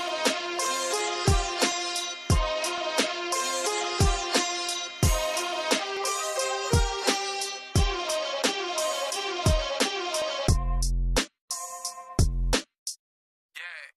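From about 0.65 s through 13.4 s there's a regular click or pop every 1.06 s, around fifteen of them, heard wherever there's signal. That steady spacing is the giveaway for clock drift buffer slips, likely two devices running on separate clocks that disagree by a few hundred parts per million. The buffer between them creeps until a small block, something like fifteen samples, gets dropped or repeated, and each slip leaves that tick.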